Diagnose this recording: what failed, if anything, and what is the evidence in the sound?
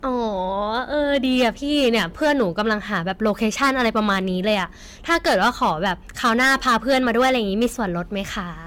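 Hard clipping at the converter or sample-format stage: speech driven about 12 dB past full scale, peaks flattened on a few percent of samples, harsh fuzz throughout.

Generation loss at the codec stage: swirly, hollow, smeared sound with blurred attacks and nothing above 17 kHz throughout, likely from repeated re-encoding consistent with AAC-LC at 96 kbit/s.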